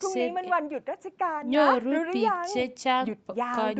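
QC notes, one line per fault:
The speech sits within a band that stops at about 8 kHz, as expected from call microphone processing and a WebRTC call path with an Opus-type codec, and nothing in it departs from that normal state.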